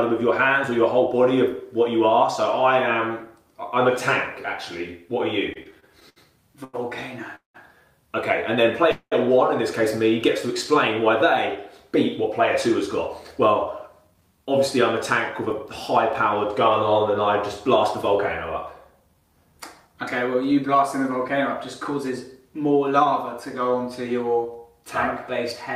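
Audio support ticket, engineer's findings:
Repeated stalls (stutter), 5.53 to 7.56 s: eight short holds totalling 430 ms, longest 191 ms. Jitter buffer repeatedly underrunning on slow packet arrival, last sound extended each time. Nothing lost, but drags.

Call audio freeze, 8.91 to 9.13 s: sound held and fading for 0.2 s, including about 80 ms near-silent, then resumes where it stopped. Likely a jitter buffer underrun from delayed packets.

Jitter buffer speed-up, 11.96 to 15.51 s at 104% and 19.00 to 20.83 s at 109%: pitch unchanged, hurried pace at 109%. Buffer overfilled, receiver trimming pitch-period slices, roughly 150 ms removed each time.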